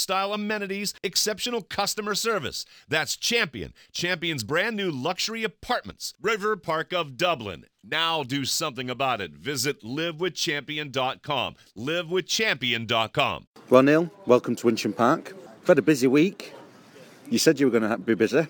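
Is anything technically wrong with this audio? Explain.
Yes, there's imaging from linear upsampling all the way through. The rate was apparently doubled by joining samples with straight lines, so the top end is dulled and a faint mirror image about 25 dB down sits between roughly 11 and 22 kHz, adding a light metallic shimmer on sibilant, bright sounds.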